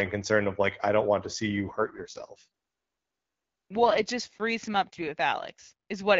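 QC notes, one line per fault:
1.48–4.08 s, AMR rate drop: the wideband speech keeps its full band and has no gap, but turns rougher and more synthetic, which fits the codec stepping down from 12.65 to 6.6 kbit/s on a weak link, then recovering to clearer speech afterwards.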